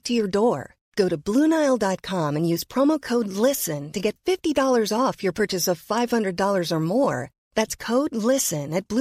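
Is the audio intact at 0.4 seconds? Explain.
Yes, at 0.4 s the speech plays through cleanly, with no dropout, click, distortion or other fault at that moment.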